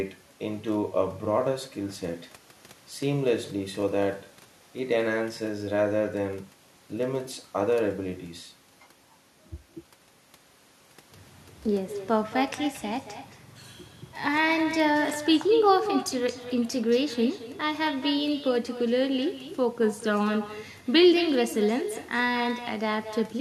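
Throughout the clip, there is echo with no canceller: the far end's loudspeaker feeds back into its microphone and nothing removes it, so the speech returns after the round trip. Each phrase is trailed, around a fifth of a second later, by a thinner copy about 11 dB quieter.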